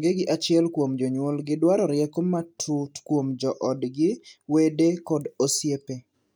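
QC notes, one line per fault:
No faults heard in this clip.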